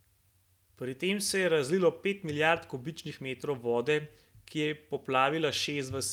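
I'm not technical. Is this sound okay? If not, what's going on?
Yes, nothing in this speech recording points to a technical problem with the signal itself.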